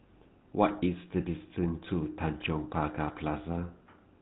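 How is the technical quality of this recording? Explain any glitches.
The technical quality is poor: the speech has been through an old mobile-phone codec, and two short bursts of transmission errors break it up further.

GSM full-rate codec, throughout: the encoder rebuilds the speech from a vocal-tract model driven by a sparse, regularly spaced pulse train, and discards everything above 4 kHz. The result is a dull, band-limited sound with a plainly audible buzzy, gravelly roughness, consistent with 13 kbps GSM full rate.

GSM bit errors, at 0.70 to 0.75 s and 2.40 to 2.47 s: corrupted bits reached the decoder, scrambling its filter, pitch and gain values over a few frames each. The spectrum warps and the level jumps, so the speech briefly breaks into squawks, pops and a gargling sound.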